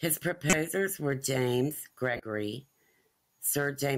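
Corrupt frame decoded at 0.50–0.59 s and 2.13–2.23 s in speech. Damaged compressed frames were played anyway, so misread gains and codes put energy at the wrong frequencies. Each burst spans about three frames: the first is loud (about −10 dBFS), the second quieter (about −25 dBFS).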